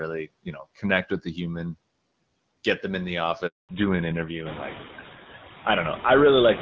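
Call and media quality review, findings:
Noise suppressor artifacts, whole clip: residual background sinks between phrases and swells under speech. Suppressor is cutting what it reads as steady noise by about 20 dB, band by band, frame by frame.

Handover gap, 3.47 to 3.69 s: audio drops out cleanly for 220 ms, then comes back. Probably a network handover with no speech frames delivered during the switch, so whatever was said in that window is simply gone, not concealed.

Fallback to narrowband, 3.69 s to end: right after the gap the top end collapses, with nothing above 4 kHz, so the speech goes duller and rougher. Before this, the band-limiting and texture point to AMR-WB at around 12.65 kbit/s with only light coding damage. Afterwards it sounds like GSM full rate at 13 kbit/s, likely renegotiated on the new link after the handover.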